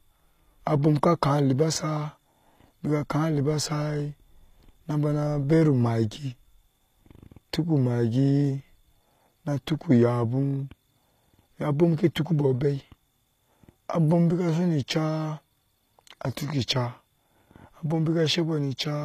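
Throughout the clip the treble sounds bright but synthetic: s sounds come out gritty and lispy, and nothing remains above about 14.9 kHz. This is likely HE-AAC compression at a low bitrate, near 24 kbps, rebuilding the upper band from copied lower harmonics.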